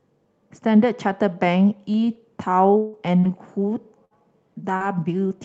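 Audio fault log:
2.77–2.96 s, long network dropout: the sound carries on as a buzz or hiss that fades over about 160 ms without dropping to silence, then resumes further along with that stretch gone. The likely cause is a run of packets that never arrived, with the receiver stretching the last sound across the hole.
2.93–2.95 s, 3.23–3.25 s and 4.80–4.82 s, lost packet rebuilt from error correction: each 20 ms frame plays without a gap but sounds coarser and grainier, because the decoder used the low-bitrate backup copy carried in the following Opus packet instead of the lost original.
3.20–3.26 s and 4.77–4.83 s, short concealed packet loss: about 40 ms went missing each time, and roughly 35 ms of it was filled by extending the preceding sound before blending back into real audio, heard as a brief smear or wobble.
4.05–4.14 s, burst of packet loss: about 60 ms of consecutive audio was lost, and the receiver stretched the last sound through nearly all of it while turning it down, so a fading buzz or hiss stands in before the sound resumes with that part skipped.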